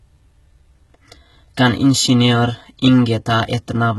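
Speech with heavy HE-AAC compression throughout, likely around 16 kbps. Treble up to 11.8 kHz is rebuilt, gritty and metallic rather than simply dulled as plain band-limiting sounds.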